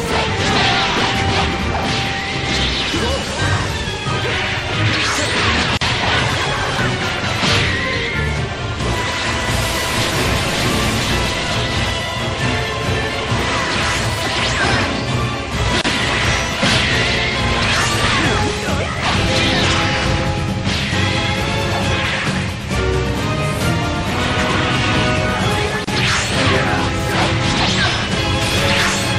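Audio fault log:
throughout, MP3 compression: The treble is capped and there's a watery, swirly quality as quiet detail flickers in and out between frames, with attacks smeared. The likely cause is a starved MP3 encode, and the damage fits something around 64 kbps.
5.77–5.81 s, 15.81–15.84 s, 25.84–25.88 s, gap at a join of encoded pieces: Short dropouts of about 41, 31 and 31 ms land every 10 s. The sound cuts off with smeared edges and resumes where it left off, because separately encoded chunks were joined with their start delay and end padding left in.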